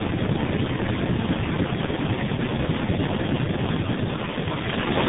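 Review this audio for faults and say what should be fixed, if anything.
Tandem speech coding runs throughout: the speech is rough, muffled and warbly, with nothing above 3.8 kHz. Its cumulative damage points to three speech coders in series, consistent with G.729A, G.723.1 and CVSD, each re-encoding the previous one's degraded output. To prevent it, keep the call in a single codec end to end, using transcoder-free operation or codec negotiation so the audio is never decoded and re-encoded at network borders.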